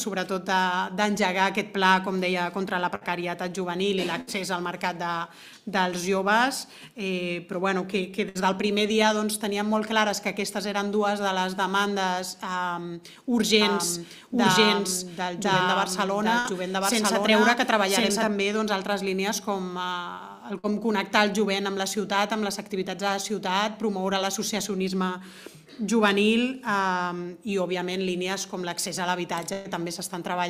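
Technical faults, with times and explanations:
2.95–3.04, 4.21–4.30, 8.29–8.38, 16.39–16.48, 20.59–20.72 and 29.53–29.68 s, burst of packet loss: each gap is bridged by a held, fading continuation of the preceding sound, about 50–60 ms long (116 ms at 29.53 s). The audio then resumes with 60 ms missing, or 120 ms in the last gap.
13.61–18.27 s, doubled audio track: a second full-band copy runs about one second behind at roughly equal level. It has no decay or room colouring, and it starts and stops abruptly, likely from a duplicate capture path or misaligned edit.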